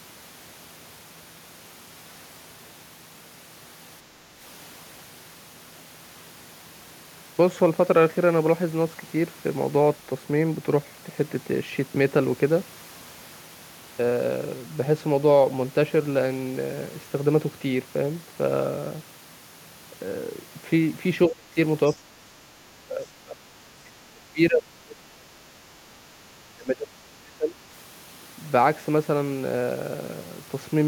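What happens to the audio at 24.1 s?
Speech suppressed in double talk, from 23.64 to 25.89 s: the speech sinks sharply, falling by around 30 dB at its deepest. The likely cause is an echo canceller that, with both ends talking at once, could not separate the near talker from loudspeaker echo and attenuated both.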